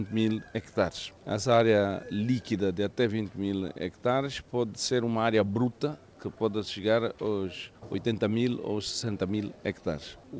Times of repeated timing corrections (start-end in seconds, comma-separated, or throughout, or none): 0.14-10.24